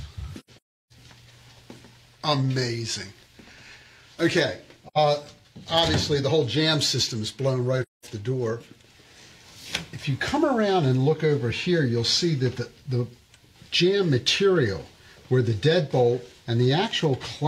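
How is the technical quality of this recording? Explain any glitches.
The recording has two recurring faults: dropouts from lost audio frames and brief peak clipping.

AAC frame loss with muting at 0.40–0.92 s, 4.87–4.98 s and 7.82–8.05 s: the decoder zeroed missing frames, and overlapping windows fade each gap in and out. About 430 ms vanishes in scattered pieces across the first span, the longest run roughly 0.3 s, then shorter soft holes of 85 ms and 213 ms.

Hard clipping at 4.38 s and 5.78–5.81 s: peaks exceeded a stage's limit by about 3 dB and were sliced flat, adding high harmonics. Each event is very short, heard as a quick crackle on the loudest moment.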